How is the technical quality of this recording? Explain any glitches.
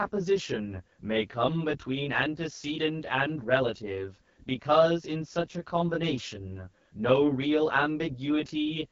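The recording has two technical problems that run through the whole clip. Neither comes and goes.

Channel delay (comb filtering), throughout: one channel arrives roughly 20 ms after the other, and the two are folded to mono. Shared content cancels at evenly spaced frequencies starting down around 20 Hz. The speech therefore sounds rough or slightly doubled.

AMR wideband (HD Voice) codec, throughout: the speech was squeezed through AMR-WB at a low rate. The plainly audible roughness fits the 8.85 kbit/s mode. The codec's vocal-tract model struggles at that rate, so the speech turns raspy and gritty, and nothing survives above about 7.5 kHz.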